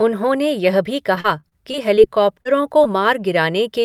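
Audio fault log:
1.15 to 2.47 s, repeated packet loss (robotic sound): eight separate gaps, the longest about 35 ms, were each bridged by extending the preceding sound, so roughly 13% of the stretch is patched audio. The quick succession of synthetic fills gives choppy speech with fragments missing.
1.76 to 2.96 s, jitter buffer slow-down: the receiver rebuilt its reserve by repeating single pitch periods and slivers of pauses, adding about 60 ms. Speech here runs at 96% speed without any pitch change, so syllables sound slightly stretched and drawn out.
2.84 to 2.87 s, short concealed packet loss: about 20 ms of audio arrived too late to decode, and the gap was filled by continuing the last sound before blending back into the real signal. It comes through as a brief smear or wobble.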